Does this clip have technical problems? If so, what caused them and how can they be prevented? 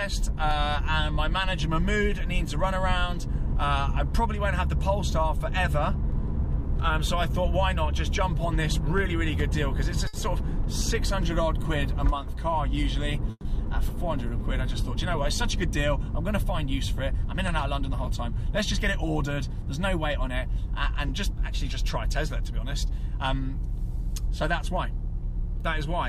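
Yes. Five kinds of fault are audible.

Clock drift buffer slips: a click recurs every 1.12 s from 0.51 s to the end of the clip. This steady pattern likely comes from two devices on independent clocks differing by roughly 150 ppm, so a handful of samples are dropped or repeated at each slip. Locking both devices to one clock, or resampling adaptively between them, prevents it.

Short stall from a late packet: from 10.07 to 10.15 s the sound is held about 60 ms too long, with a faint buzz or dip. A packet arrived late, the jitter buffer ran dry, and the receiver stretched the last sound until the packet arrived. A deeper or better-adapted jitter buffer avoids this.

Short concealed packet loss: from 10.19 to 10.22 s there is a brief smear. About 20 ms of audio never reached the decoder, and the receiver bridged the gap by extending the preceding sound before blending back in. Forward error correction or redundancy on a lossy link reduces this.

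Call audio freeze: from 13.31 to 13.47 s the sound hangs for 140 ms, fading to roughly 30 ms of silence before resuming where it stopped. This is likely delayed packets emptying the jitter buffer. Steadier network routing and more buffer headroom help prevent it.

Jitter buffer speed-up: from 15.57 to 18.95 s, 19.40 to 21.48 s, and 21.97 to 24.88 s the sound runs 2 to 3 percent fast at unchanged pitch. The receiver removed around 70, 50 and 70 ms of pitch periods to shed excess delay. Smoother buffer-target adjustment limits this.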